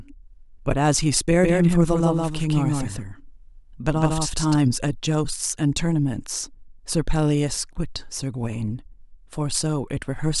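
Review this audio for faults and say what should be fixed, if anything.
From 1.43 to 4.55 s the speech is heard twice. A second copy about as loud as the first trails it by roughly 150 ms, with no decay or room colour, and cuts in and out abruptly. This is a doubled audio track, likely from a second, slower capture path or two out-of-step copies in an edit. Prevent it by monitoring a single capture path and checking edits for overlapping duplicate regions.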